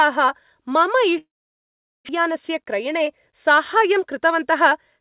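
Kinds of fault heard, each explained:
Long network dropout: From 1.18 s to 2.11 s the sound smears into a fading buzz, then about 0.78 s of near-silence before it resumes with roughly 0.8 s of audio missing. The likely cause is packets that stopped arriving while the receiver filled the gap.
Jitter buffer speed-up: From 2.19 s to 3.97 s the audio plays at 104% of normal speed with unchanged pitch. The receiver cut short pitch-period slices, around 70 ms in all, to drain the backlog left after the gap.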